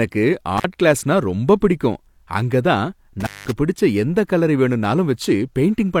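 Intermittent contact appears at 0.58 to 0.64 s, just before "கிளாஸ்னா ரொம்பப் பிடிக்கும் அங்கதான்", and again at 3.20 to 3.52 s, between "கிளாஸ்னா ரொம்பப் பிடிக்கும் அங்கதான்" and "பிடிச்ச எந்தக் கலரை". A loose cable or plug briefly loses its connection, so the speech drops out or breaks up, with crackle where the contact opens and closes. The first break stays open for about 47 ms. The second lasts about 192 ms, roughly four times as long.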